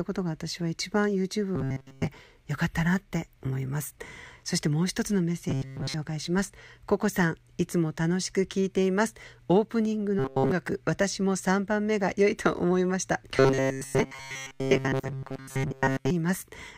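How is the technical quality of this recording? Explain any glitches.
The recording has four stretches of robotic sound from repeated short buffers, at 1.56–2.07 s, 5.49–5.95 s, 10.19–10.51 s and 13.37–16.10 s. The speech there becomes a rigid metallic buzz at 134 Hz that still loosely tracks the words. The likely cause is audio arriving too slowly, so the playback loops a segment of about 7.5 ms. Most of each span is repeated, and at 10.19 s nearly all of it is. On a spectrogram, flat harmonic lines at multiples of 134 Hz replace the natural pitch contours, and the waveform shows identical cycles repeating back to back.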